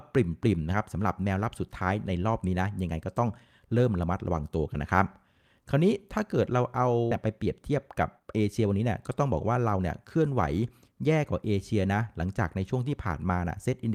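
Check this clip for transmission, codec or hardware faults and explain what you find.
Two transmission faults appear, close together in the middle of the speech.

Skip ahead at 7.11 s: about a second of audio was discarded while later audio waited, so the speech jumps forward with no gap.

Jitter buffer speed-up from 7.15 to 10.05 s: short pitch-period pieces, about 0.4 s in total, were cut repeatedly, so speech runs at 112% speed, same pitch, sounding hurried.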